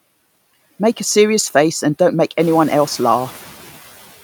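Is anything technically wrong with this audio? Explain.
No, nothing technically wrong stood out on listening to this speech, and the room's background noise that rises by about 10 dB at around two and a half seconds is part of the recording itself, staying about 21 dB below the speech.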